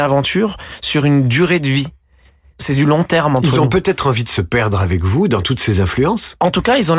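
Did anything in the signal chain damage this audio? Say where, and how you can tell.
No, there's nothing in this speech recording that points to trouble anywhere along the chain, so there's no stage to single out here.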